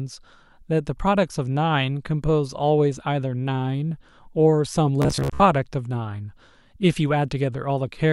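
Bluetooth stutter from 5.02 to 5.40 s: the receiver repeatedly lost or received late packets and replayed its last short slice, producing a choppy buzz. About 250 ms went missing across roughly 380 ms, the longest gap being 58 ms, before the speech resumed further along.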